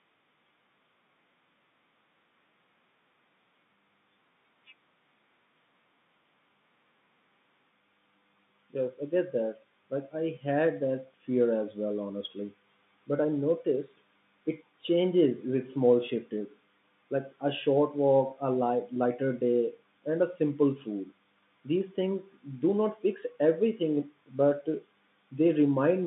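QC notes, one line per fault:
Nothing to flag here, just speech carried over an ordinary G.711 telephone line, with the usual narrow band of roughly 150 Hz to 3.7 kHz you'd expect from a landline call.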